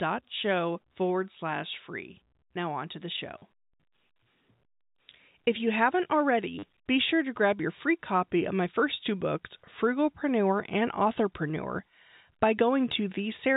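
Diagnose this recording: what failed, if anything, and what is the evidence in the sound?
Two short robotic stutters, each 40 ms, break the speech at 3.38 to 3.42 s and 6.59 to 6.63 s. This is packet loss with last packet repeated at the network stage: the receiver replayed one packet until new ones arrived, which fits four lost 10 ms packets repeating at 100 Hz.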